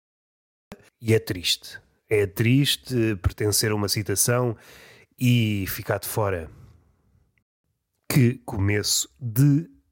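Speech with two brief drops to silence, at 0.65 s for about 71 ms (during the fade-in) and at 7.43 s for about 216 ms. Each is likely a Bluetooth stall: the headphone buffer ran dry while resent packets were awaited. Unlike a packet-loss glitch, sound stops dead and then resumes.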